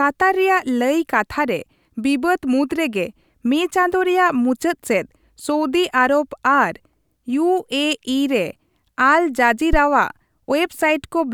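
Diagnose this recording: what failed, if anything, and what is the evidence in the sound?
A phantom power thump hits the speech at 9.73 s and is over by 9.79 s. This points to the analogue input stage. It is a deep, low thump that peaks at about −5 dBFS. It dies away quickly, with a decay of about 12 ms. The cause is a supply being switched on a live input. The voltage step passes through the coupling capacitors and reaches the preamp as a single low-frequency pulse.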